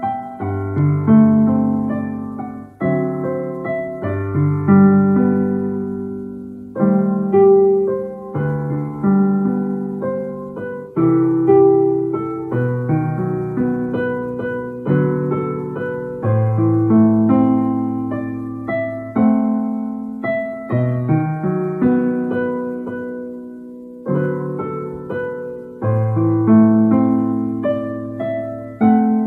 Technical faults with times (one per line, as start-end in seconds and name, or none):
none